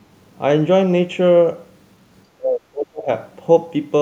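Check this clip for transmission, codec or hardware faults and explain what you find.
One fault stands out: speech suppressed in double talk, from 2.36 to 3.09 s. Across that stretch the speech level collapses, sinking by about 30 dB at its deepest, so the talker fades and partly drops out for most of that 0.7 s before returning. The likely cause is an echo canceller that, with both ends talking at once, could not tell the near talker from loudspeaker echo and attenuated everything.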